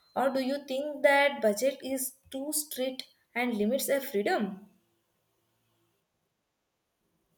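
No technical faults can be heard anywhere in the speech; the signal holds steady from its opening moment to its close.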